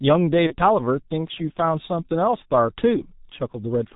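The whole clip carries the sound of the G.723.1 codec. The damage is heavy. Nothing comes through above 4 kHz, so the speech is muffled. The coder works in 30 ms frames and tracks the voice slowly. Consonants smear together and the tone turns hoarse. The codec runs at 6.3 kbit/s.

From 0.47 to 0.56 s there is VoIP packet loss concealed by the speech codec. The gap fits one lost 30 ms frame. The decoder filled it by repeating its last pitch and filter at falling gain. That makes a brief stretched sound that fades. Each frame builds on the one before, so the voice stays weak or distorted for tens of milliseconds after about 0.56 s.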